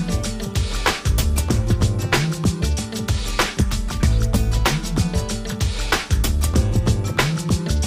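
Nothing stood out on listening; no technical faults could be heard anywhere in the audio.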